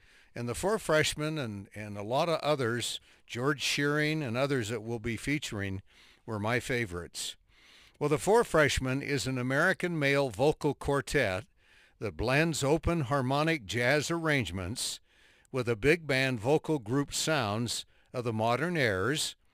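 From start to finish there's crude rate conversion, which fits a 48 kHz to 44.1 kHz change done by just picking the nearest sample and dropping the rest. That leaves a patterned error, roughly 25 dB under the speech, heard as a gritty, inharmonic fizz riding on louder and brighter sounds.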